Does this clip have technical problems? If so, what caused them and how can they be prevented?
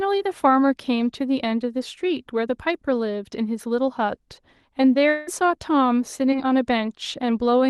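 Yes. From 5.09 to 5.29 s, roughly a fifth of a second of speech is gone, and a fading buzzy continuation of the last sound fills almost all of the gap with no fully silent stretch. This is most likely a long network dropout: about 180 ms of audio never arrived, and the receiver stretched out what it had. A short concealed loss would be much briefer. A tick or smear would not carry on fading for so long. To prevent it, use a stable wired or stronger wireless connection, and give the link enough jitter buffering to ride out brief stalls.

At 6.31 to 6.34 s there is a short concealed packet loss. About 20 ms of audio was missing, and the decoder spent around 11 ms continuing the previous sound before blending back into the real signal. The result is a quick smear or wobble rather than a fading buzz. The gap is far too short for a dropout. Forward error correction or packet redundancy in the codec, together with reduced network congestion, would prevent this loss.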